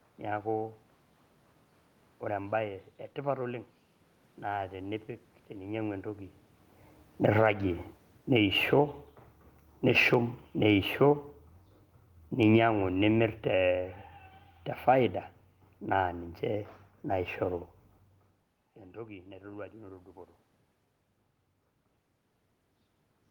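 From 7.09 s to 13.89 s, automatic gain falling lowers the level by about 9 dB. The control judged the input too loud, so speech and room noise sink together, unlike the talker's movement near 6 s. Overlapping it, from 7.47 s to 10.28 s, automatic gain rising adds about 4 dB. Voice and background swell as one over nearly three seconds, which a talker moving closer would not cause.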